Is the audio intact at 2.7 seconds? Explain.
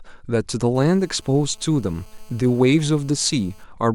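No. At 2.7 s the speech carries GSM phone buzz, present from 0.75 s to 3.64 s. A nearby 2G handset on a call transmits bursts about 217 times a second, and the audio circuitry rectifies them into a steady, raspy 217 Hz buzz with dense harmonics, about 32 dB below the speech.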